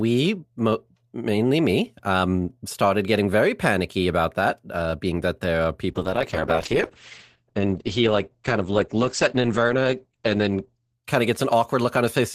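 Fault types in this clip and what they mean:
Call bitrate drop: From 5.9 s, just after "being that there are", until 11.05 s, just before "kind of", the speech turns rough and muffled. The call's bandwidth estimate collapsed, and the encoder was pushed from 48 kbps down to 9 kbps, where it stayed for about 5.1 s. With so few bits, the codec quantises coarsely and narrows the audio band from 20 kHz to 8 kHz, stripping away the brightness and crisp consonant detail.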